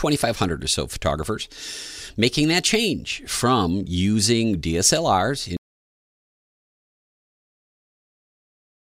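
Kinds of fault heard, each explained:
Audio dropout to silence: The sound cuts off abruptly at about 5.57 s and never returns. From there to the end the signal is silent, with no room tone at all. The likely cause is a lost input while recording continued. Whatever followed is gone.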